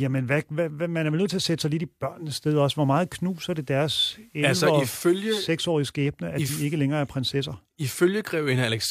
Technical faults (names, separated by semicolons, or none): digital radio blending to analogue